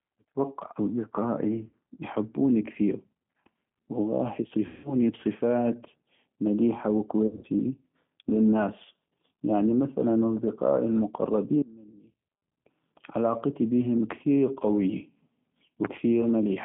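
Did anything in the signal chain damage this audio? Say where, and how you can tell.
Yes. The whole clip has been through the G.729 codec at 8 kbit/s. Everything sits in a narrow phone band of roughly 150 Hz to 3.4 kHz, and the speech has that rough, slightly synthetic edge of a pulse-coded vocal model. It's a codec-stage thing, and it's plainly audible throughout.

On the network side there's VoIP packet loss concealed by the speech codec in three places: 1.69 to 1.75 s, just before "يحبوني كثيغ"; 4.66 to 4.94 s; and 7.27 to 7.47 s, right after "بصفات مليحة". The decoder stretches its last pitch and filter into a sound that fades, and the voice stays weak briefly afterwards.

From 11.62 to 12.42 s the level drops by about 26 dB and only a faint remnant survives. That's the signature of one channel inverted, most likely a polarity flip in the wiring or driver, so the centred speech cancels when the two channels are summed to mono.

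Then there are two loud pops, each a single sharp click roughly 20 dB above the speech. The first is at 14.11 to 14.13 s, just after "علاقتي بيهم", and the second is at 15.85 to 15.87 s. The speech carries on underneath, which points to a voltage spike added on top, likely from the analogue side or a driver glitch.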